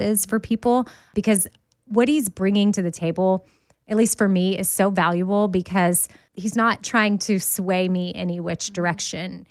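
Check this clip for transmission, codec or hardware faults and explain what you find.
One fault stands out: a lost packet rebuilt from error correction at 0.63 to 0.65 s, just before "because what he's bringing". This speech clip appears to have lost a single 20 ms packet, and the decoder filled it from the low-bitrate backup copy carried in the following packet (Opus in-band forward error correction) instead of leaving a gap. The speech therefore keeps flowing, but that brief stretch sounds rougher and noisier than the audio around it.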